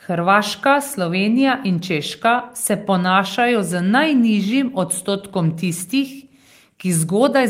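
Nothing in the speech stood out as a technical fault on listening.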